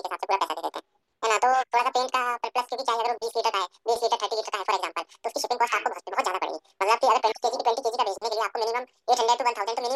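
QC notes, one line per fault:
Throughout: audio read two samples at a time (double speed). The speech runs at 2x speed and sits 12 semitones up, a full octave, so everything sounds chipmunk-quick. What's happened is the reader grabbed pairs of samples as single frames, as if the stream were two channels or had samples twice as wide, so the playback skips through the material twice as fast.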